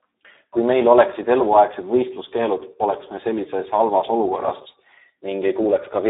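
The speech has been through heavy Speex codec compression throughout, at a rate consistent with about 8 kbps. Too few bits for the excitation leaves it hoarse and noisy, with a telephone-like 300 Hz to 3.7 kHz line band and nothing above 3.8 kHz.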